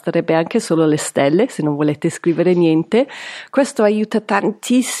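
No technical faults are audible.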